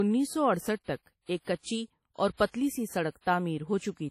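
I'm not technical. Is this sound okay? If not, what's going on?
No. Throughout, the speech keeps the artefacts of an earlier low-quality encoding, with nothing above about 15.5 kHz. This is likely low-bitrate audio saved at a high bitrate, which can't restore the detail already lost.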